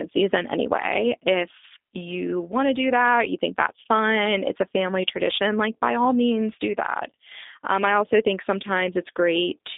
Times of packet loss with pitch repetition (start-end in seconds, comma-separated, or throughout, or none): none